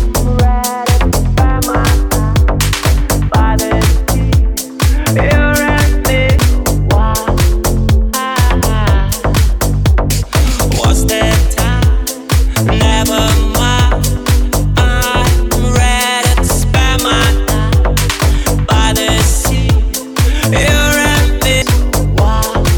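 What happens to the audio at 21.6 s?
At 21.62 s there is a brief burst of damaged data in the compressed stream: part of the encoded file is wrong, so the decoder misreads that frame, loses sync and hunts for the next valid frame header. The result is a short chirp or blip. On a spectrogram it shows as a thin vertical smear of broadband energy; on the waveform, a jagged spike or discontinuity where the signal jumps.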